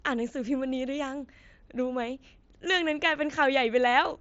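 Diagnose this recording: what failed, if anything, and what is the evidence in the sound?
Nothing in the recording stood out as a failure on listening, with the speech carried over what sounds like an ordinary wideband Bluetooth headset link.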